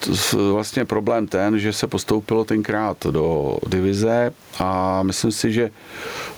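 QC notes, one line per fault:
throughout, gain pumping: the gain swings by around 15 dB, with the room noise about 37 dB below the speech. Loud and soft syllables land closer in level, leaving the speech squashed. The likely cause is input gain set far too high, with a fast limiter clamping down on each loud sound and releasing in the gaps.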